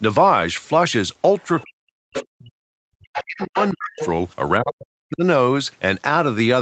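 Speech with two kinds of echo-canceller trouble. The other side's voice leaking through is heard at 1.39–1.66 s, faintly, then more strongly at 2.15–2.26, 3.14–3.24, 3.40–3.70 and 3.97–4.06 s, likely residual loudspeaker echo the canceller failed to subtract from the microphone. Speech suppressed in double talk appears from 1.63 to 4.01 s and again at 4.59–5.24 s. The talker's level dips in pieces, at worst nearly to silence, likely because the canceller attenuated everything while both sides spoke at once.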